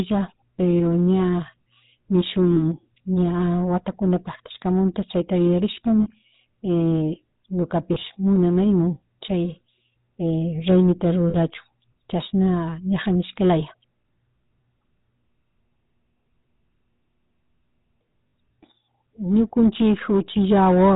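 Throughout, the speech passes through the GSM full-rate codec at 13 kbps. Its pulse-driven vocal-tract model cuts everything above 4 kHz, leaving a plainly audible buzzy, gravelly roughness. Lost GSM frames occur at 2.52–2.62 s, 6.02–6.08 s, 7.94–7.97 s (just before "munanaymun chay"), 11.30–11.36 s and 18.18–18.33 s. Each time, the decoder repeats the last good frame, so the sound briefly freezes into a metallic ring. The final cluster is spread over about 0.16 s, with its longest gap around 70 ms.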